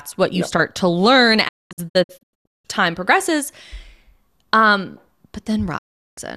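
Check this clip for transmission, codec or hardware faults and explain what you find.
There are two digital broadcast dropouts in this speech. The first runs from 1.47 to 2.66 s, between "yeah start to learn" and "time progresses": the audio breaks into several short holes spread over about 1.15 s, the longest about 216 ms, with about 744 ms lost in total. The second mutes 5.77 to 6.19 s. The receiver lost the stream or rejected corrupt frames and muted, with 20 ms fades, until clean frames arrived. The missing speech is simply gone.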